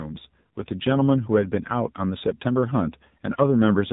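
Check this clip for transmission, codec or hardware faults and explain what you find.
One codec fault runs through the whole recording. The speech has passed through the AMR narrowband mobile codec, AMR-NB. The codec works at 8 kHz sampling, so nothing above 4 kHz survives. The sound is dull and phone-like. It models the vocal tract and excites it with a few pulses in each 5 ms slice of a 20 ms frame. The damage is plainly audible, with a buzzy, synthetic edge that fits a low mode of about 7.4 kbps.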